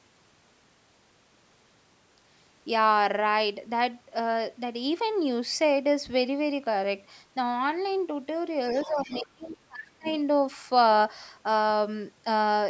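From 8.76 to 9.21 s a faint second voice, around 15 dB below the speech, sits under the talker. This is the other side's voice leaking through, likely loudspeaker echo the canceller failed to remove. On a spectrogram it shows as a weaker, overlapping harmonic pattern. Starting at 8.86 s and running to 10.07 s, the talker's own speech is suppressed in double talk, likely because the canceller could not separate the talker from that echo and turned both down. The voice dips and breaks up, falling by as much as about 25 dB, for roughly a second in total. The waveform shows the envelope caving in, and the spectrogram thins and fades in patches. Shorter scraps of leaked voice return at 9.41 to 9.55 s, around 25 dB down, and at 10.04 to 10.16 s, around 20 dB down. Each is a brief blot of foreign harmonics.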